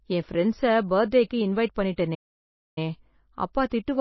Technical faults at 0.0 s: MP3 compression

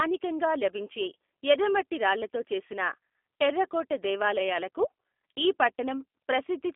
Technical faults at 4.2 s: G.729 codec

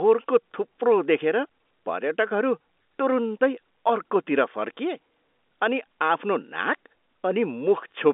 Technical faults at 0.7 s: none

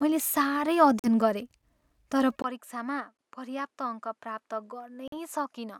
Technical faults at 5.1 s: input switched to a poorer device; Bluetooth dropout

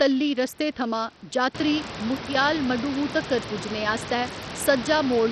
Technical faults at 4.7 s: Bluetooth SBC compression

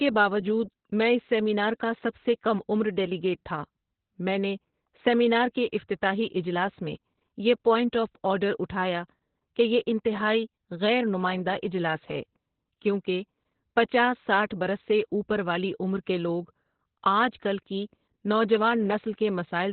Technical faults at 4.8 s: Opus voice compression

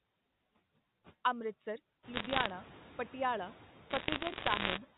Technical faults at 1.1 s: noise suppressor artifacts

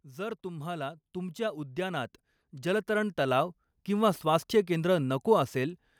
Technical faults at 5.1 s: none

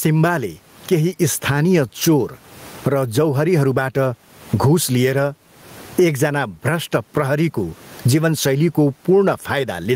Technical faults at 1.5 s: gain pumping

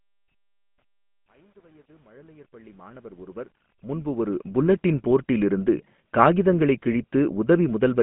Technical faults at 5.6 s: GSM full-rate codec

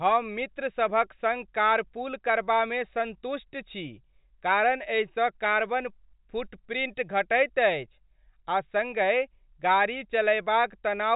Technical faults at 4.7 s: none

